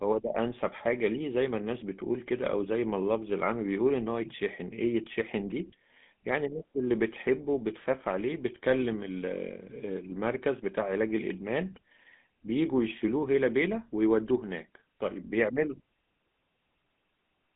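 From start to finish the speech carries the damage of the GSM full-rate codec, with the band held between about 150 Hz and 3.6 kHz. The codec rebuilds the voice from a vocal-tract model driven by a sparse, regularly spaced pulse excitation, and at a rate that fits 13 kbps this leaves a plainly audible buzzy, gravelly roughness. Plain telephone band-limiting would sound muffled but smooth, so it is the grainy buzz that marks this codec.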